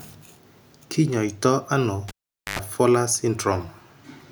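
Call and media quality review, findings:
Cable pulled and plugged in, 2.08 to 2.59 s. Pop, 0.46 s near silence, then 0.1 s of 50 Hz mains buzz while the plug tip alone touches, pop at reseat. Component: capture-side input cable or jack, hot-unplugged.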